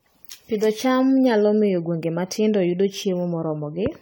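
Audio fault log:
throughout, generation loss: the speech sounds swirly, smeared and hollow, with blurred attacks, likely from repeated lossy re-encoding, which fits an AAC-LC chain at 64 kbit/s run around ten times, each pass requantising on a shifted frame grid so noise and spectral holes pile up.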